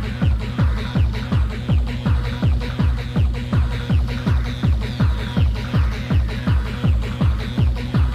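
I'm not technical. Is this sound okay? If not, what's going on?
Yes, nothing in this sound points to a technical fault in how it was recorded, processed or delivered.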